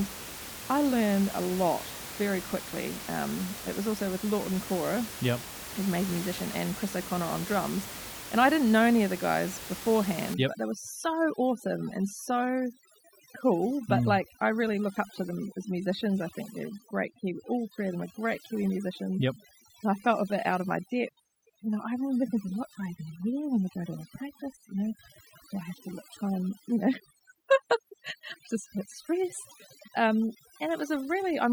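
From 10.34 s to the end, overdone noise removal sets in. Bands near the noise estimate are cut hard, leaving twinkling specks.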